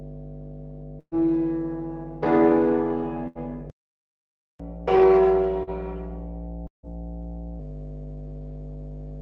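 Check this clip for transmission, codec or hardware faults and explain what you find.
Several faults are present, layered over a call-codec path whose top end stops near 12 kHz.

Mains hum runs throughout: a steady 50 Hz tone with low harmonics, strong at roughly 10 dB below the signal. A ground loop or nearby transformer is leaking power-line current into the audio. It is constant, unlike the event-based faults below.

A burst of packet loss occurs at 0.99 to 1.15 s. The receiver stretches the last sound for about 120 ms as a fading buzz or hiss, ending in roughly 60 ms of silence. A second burst at 3.28 to 3.38 s is concealed for about 75 ms. Each skips about 80 to 120 ms of audio, which is longer than a brief smear.

A playback stall runs from 3.70 to 4.60 s. The sound simply stops for about 0.9 s with no fading fill, likely because the player's buffer ran dry. Clean silence is what separates it from network loss.

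Catch-up at higher speed follows from 4.60 to 7.59 s. The backlog is resampled at 1.15 times normal speed, raising the pitch about two semitones until it settles. It is distinguishable from a pitch fault because tempo rises too.

A short concealed packet loss at 5.63 to 5.70 s fills a 40 ms hole with a continuation of the previous sound. It is heard as a quick smear or wobble, too short to leave silence.

A long network dropout at 6.67 to 6.86 s loses about 160 ms. A brief fading fill gives way to around 130 ms of silence, likely from nothing arriving over the network. The long silent tail distinguishes it from the bursts.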